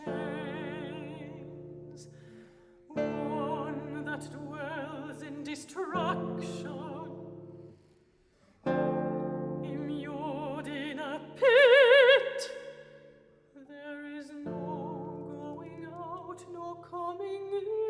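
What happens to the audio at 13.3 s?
Nothing goes wrong at 13.3 s: the audio plays through that moment intact, with no dropout, click, glitch or other fault.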